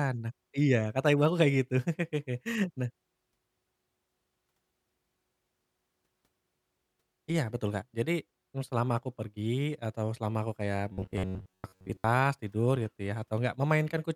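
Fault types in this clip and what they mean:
Robotic sound from repeated short buffers: from about 10.93 to 12.04 s, right after "atau selama aku kayak" and ending before "tidur gitu ya", the speech collapses into a stiff metallic buzz near 94 Hz that only loosely tracks the syllables. The likely cause is audio arriving too late, so the player keeps replaying a tiny slice of roughly 11 ms in place of most of that stretch, and the repetition imposes its own fixed pitch.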